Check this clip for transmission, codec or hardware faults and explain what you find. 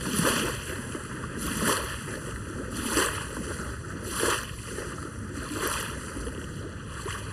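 One fault is present throughout the clip: channel delay (comb filtering). One channel arrives under a millisecond late, and summing to mono cancels shared content at evenly spaced frequencies, the first notch near 700 Hz. The everyday sound comes across hollow and phasey.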